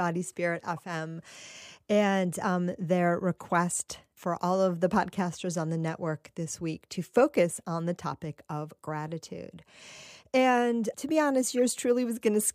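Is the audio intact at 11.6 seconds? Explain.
No. At 11.58 s the speech is interrupted by a corrupt frame decoded: bits in the compressed stream were damaged in transit or storage, and the decoder played the affected data instead of discarding or concealing it. The misread gains and spectral codes put energy where the signal has none, for a few frames' worth of output, which sounds like a brief chirp or squeak. Its peak sits at about -30 dBFS.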